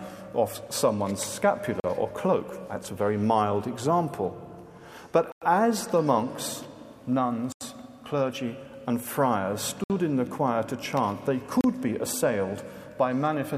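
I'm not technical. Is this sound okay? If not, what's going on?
No. The sound drops out five times, at 1.8, 5.32, 7.52, 9.84 and 11.61 seconds. Each gap lasts 33 to 96 milliseconds, then the sound carries on. This is likely a Bluetooth stall: the wireless link briefly ran out of audio.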